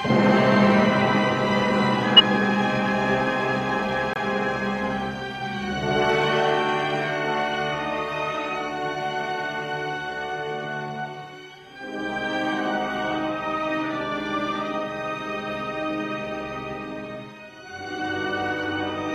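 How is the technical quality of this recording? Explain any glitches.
Two brief glitches stand out.

From 2.16 to 2.21 s there is a blip of noise: a corrupt frame decoded. Damaged data, likely spanning a couple of frames, was played anyway and put energy at the wrong frequencies.

From 4.14 to 4.18 s the audio drops abruptly into silence for about 40 ms: a corrupt frame muted. The decoder rejected a damaged frame, which fits a single lost frame, and silence replaced it while timing was kept.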